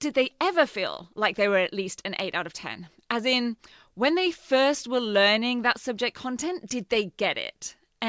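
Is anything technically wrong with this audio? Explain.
No, nothing is technically wrong with this audio.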